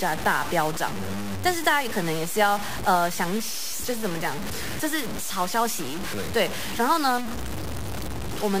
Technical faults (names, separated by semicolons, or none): low bit depth without dither